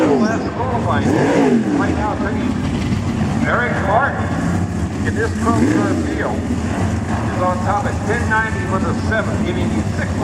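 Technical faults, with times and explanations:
No technical faults can be heard; the signal holds steady, without dropouts, interruptions or audible damage anywhere in the clip.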